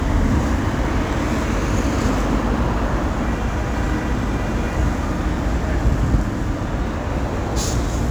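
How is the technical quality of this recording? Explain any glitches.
The recording has one fault that runs through the whole clip: crude rate conversion. The rate was dropped from 48 kHz to 44.1 kHz by simply keeping the nearest sample instead of filtering. That timing jitter leaves a gritty, inharmonic fizz roughly 30 dB below the sound. Unlike steady hiss or quantisation noise, it rises and falls with loud and bright moments.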